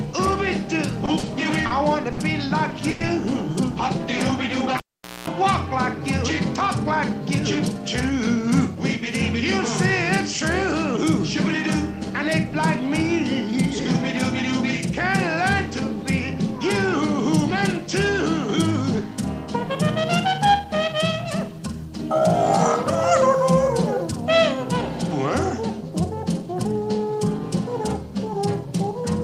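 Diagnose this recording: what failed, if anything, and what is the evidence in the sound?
Repeated stalls (stutter), 1.05 to 2.20 s, network and jitter-buffer stage. The sound catches four times, with about 150 ms of held-over sound in total and the longest hold 60 ms. Packets arrived late, and the receiver stretched the last sound each time, so nothing is lost but the passage drags.

Call audio freeze, 2.90 to 3.02 s. The sound hangs for 100 ms as a continued, fading tail without dropping to silence, then resumes where it stopped, now 100 ms later. The likely cause is a brief network hold-up that drained the jitter buffer.

Cable pulled and plugged in, 4.77 to 5.28 s, analogue wiring. A pop opens a gap of about 460 ms with near silence. During that gap there is roughly 220 ms of 60 Hz mains buzz as the plug tip makes partial contact. A second pop marks reconnection.

Jitter buffer speed-up, 8.10 to 8.96 s at 105% speed and 18.09 to 20.74 s at 102% speed, buffer stage. 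Pitch stays put, and the first stretch sounds hurried. The receiver trimmed short pitch-period slices, roughly 50 ms in each stretch, to shed excess buffered delay.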